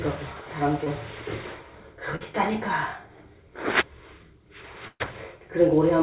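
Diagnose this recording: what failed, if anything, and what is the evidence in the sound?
Two brief smears break the sound, one at 0.84 s and a longer wobble from 2.16 to 2.29 s, where the texture briefly turns synthetic before the real audio resumes. This is short concealed packet loss at the network stage. About 20 ms and then about 40 ms of audio never reached the decoder in time. The receiver extended the preceding sound to cover each hole and cross-faded back, trimming a few milliseconds at the second join.

From 4.88 to 5.02 s the sound holds as a stretched, fading continuation, drops to silence for roughly the last 40 ms, then picks up further along with material skipped. This is a burst of packet loss: about 120 ms of consecutive audio was lost or arrived too late to play. Concealment repeated the last sound while turning it down, then gave up before real packets returned. Throughout, nothing is heard above 4 kHz, which fits a narrowband G.711 call codec.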